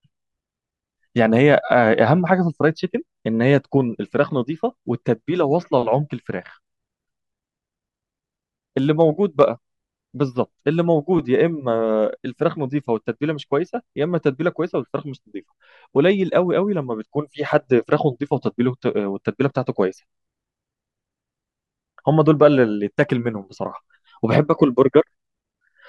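No technical faults can be heard in this recording.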